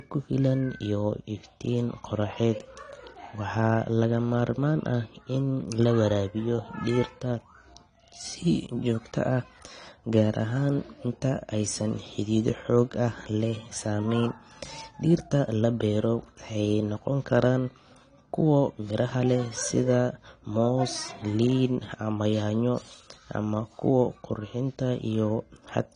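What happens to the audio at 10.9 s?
At 10.9 s, as throughout, this is likely low-bitrate audio saved at a high bitrate. A 32 kbit/s AAC-LC stage was re-encoded to 256 kbit/s MP3, so nothing above 9.9 kHz survives and the speech stays dull and band-limited.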